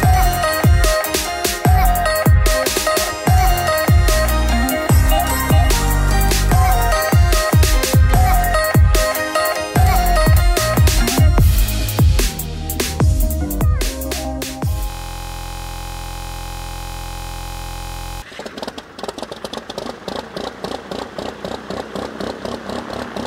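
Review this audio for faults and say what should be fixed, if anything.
From 14.9 to 18.22 s a system hang loop replays one 23.22 ms slice over a hundred times, fitting a 1024-sample ring buffer, giving a steady 43.1 Hz buzz. Unlike a dropout, the sound doesn't go silent. Unlike a random glitch, the identical fragment repeats with exact periodicity. To prevent it, fix the driver or system stall and have the audio path output silence when the buffer isn't refilled.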